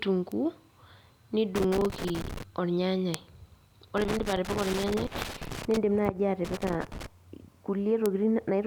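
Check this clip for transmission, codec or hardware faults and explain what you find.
Two kinds of fault show up here, both hardware or link problems rather than codec ones: isolated bit error spikes and bursts of loose connector crackle.

The bit error spikes land at 0.32, 3.14, 4.71, 6.05 and 8.06 s. Each is a single sharp tick with no connection to the speech. A flipped bit makes a sample jump by a power of two and snap straight back. Peaks reach about -20, -8, -20, -26 and -8 dBFS. The 3.14 s tick spans three adjacent samples.

The loose connector crackle comes in three irregular bursts: 1.56 to 2.43 s, 3.97 to 5.77 s, and 6.45 to 7.06 s. A worn or dirty contact keeps making and breaking, chopping the speech into scratchy fragments with pops where any DC on the line jumps. The middle burst is the longest at nearly two seconds, and the 4.71 s bit error spike sits inside it.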